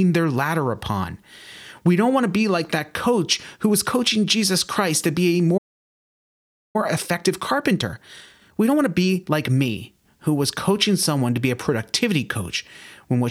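At 5.57 s, right after "to be a", the speech stops dead and the output stays silent for about 1.17 s, until 6.76 s. This is a playback stall, most likely the player's buffer running dry or its audio thread being held up.

From 6.76 s to 9.76 s the speech runs hurried, at about 1.25 times normal speed, ending just before "who was coaching someone". This is time-compressed catch-up: to work off the backlog from the stall, the player drops small slices of audio and cross-fades the remaining pieces together. Pitch stays where it belongs, which separates it from a plain fast-playback or resampling error that would also raise the voice.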